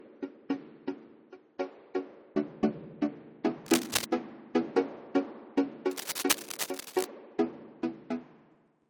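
For the first 2.0 s the audio is dull and smeared, with nothing above 7.2 kHz and stronger coding artefacts. At 2.0 s it suddenly becomes brighter and cleaner, with no gap. This is an adaptive stream starting at a low bitrate: the player began on a cheap version of the stream so playback could start quickly, then switched up once it had gauged the connection. The sound fits a 32 kbit/s MP3 stepping up to 128 kbit/s.

From 3.66 to 4.05 s, a dense, uneven scratching and rustling sits over the sound, roughly as loud as the sound itself. It returns from 5.91 to 7.05 s, a little quieter and lasting longer. This is cable scratch noise, likely from a worn cable, connector or control being moved. The shifting contact resistance produces these ragged bursts of noise.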